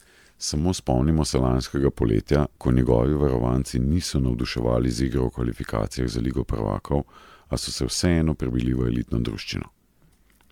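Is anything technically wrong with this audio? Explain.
Yes. Throughout the speech there is what sounds like generation loss, likely from the audio being run through MP3 encoding and decoding about ten times at a rate that fits 128 kbit/s. Each pass requantises on a shifted frame grid, so the errors stack: the sound is swirly and hollow, and consonant attacks smear. A spectrogram would show patchy holes and flickering, blocky texture in the upper bands, and the waveform's transients would look softened.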